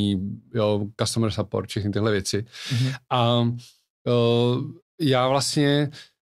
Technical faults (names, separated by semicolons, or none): none